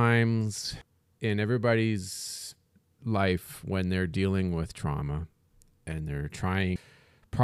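At 0.82 s, just before "in everybody's life when", compressed frames are skipped: roughly 0.4 s of speech goes missing, which fits about four frames of 92.9 ms. Again at 6.76 s, roughly 0.7 s vanishes. Unlike a silent dropout, no gap is heard. The speech jumps forward.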